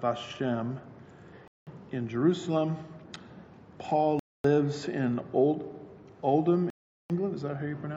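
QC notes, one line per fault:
1.48–1.67 s, 4.19–4.45 s, 6.70–7.10 s: Bluetooth stall, three dropouts of 0.19, 0.25 and 0.40 s where the sound cuts to silence and resumes, likely from interference delaying packets until the headphone buffer ran dry. The waveform goes flat and the spectrogram shows full-band vertical gaps.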